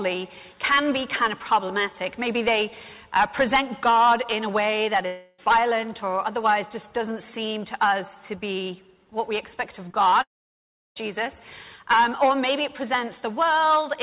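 From 5.06 to 5.40 s the audio gives way to a fading continuation of the last sound, a buzzy smear lasting about 0.32 s with no true silence. That is likely a long network dropout that the receiver filled entirely. Back-to-back short concealed packet losses follow at 9.88 to 9.92 s and 9.92 to 9.96 s, then at 10.10 to 10.14 s. Each is a gap of a few hundredths of a second, patched by extending the previous sound and blending back, so it registers only as a quick smear or wobble rather than a hole. A second long network dropout, likely the cause here too, runs from 10.22 to 10.98 s. A short fading fill gives way to roughly 0.68 s of silence before the audio resumes further on. The length and the dead stretch set it apart from the brief patches just before it. Throughout, nothing is heard above 4 kHz, which fits a G.711-style narrowband call codec.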